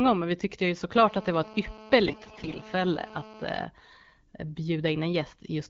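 A hard, raspy buzz at about 217 Hz, rich in harmonics, runs through this speech recording from 0.97 to 3.65 s, sitting about 20 dB below the voice. This is GSM phone buzz: a nearby 2G handset in a call transmits steady bursts 217 times a second, and the audio circuitry rectifies those radio pulses. From 2.05 to 2.58 s the voice keeps roughly its pitch and level but turns hoarse, scratchy and gargly, the mark of AMR bit errors. Around one bit in seven of the weakly protected data arrived flipped while the frame checksum still passed, so the excitation pulses and the fine pitch, gain and spectral values were decoded wrongly. The underlying AMR-WB coding at 12.65 kbit/s shows only light codec damage.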